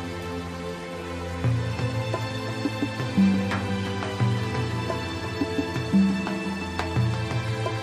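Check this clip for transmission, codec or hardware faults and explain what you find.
No transmission, codec or hardware faults can be heard.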